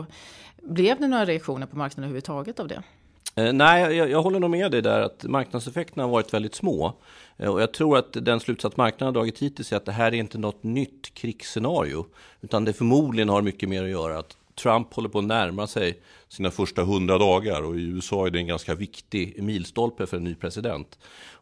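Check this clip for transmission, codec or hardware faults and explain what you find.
One fault here, a wrong sample rate. From 16.39 to 18.86 s, between "på att närma sig" and "milstolpe för en ny", the speech drops to about 0.92x speed and roughly 1.5 semitones lower, which fits 24 kHz audio played at 22 kHz without conversion, so it sounds slow and heavy.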